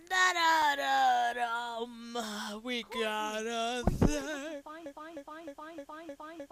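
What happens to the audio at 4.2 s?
At 4.21 s the signal drops to a block of digital silence lasting about 2.9 ms, which fits a 128-sample buffer left unfilled. Being so short, it is heard as a tick or dip; the waveform shows a brief flat run near zero, the spectrogram a thin vertical broadband line.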